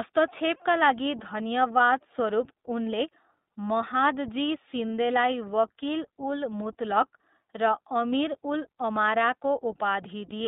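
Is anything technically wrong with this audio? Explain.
Yes. The speech has passed through the iLBC codec for its whole length. The sound is confined to a telephone band of roughly 200 Hz to 3.7 kHz, so it is thin and muffled. Each short frame's excitation is coded on its own, with no help from the frame before. The grain suggests 20 ms frames at a rate that fits the 15.2 kbps mode. The damage is plainly audible: the voice sounds rough and somewhat synthetic.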